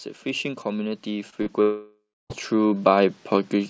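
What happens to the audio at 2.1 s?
At 2.1 s you're in the middle of what's likely a long network dropout, running from 1.62 to 2.32 s. The last sound gets stretched into a fading buzz, roughly the final 0.29 s is silence, and then audio resumes with about 0.68 s simply gone. Underneath that, automatic gain rising runs from 0.23 s to the end, with the gain control steadily pushing the level up so everything, background included, keeps swelling.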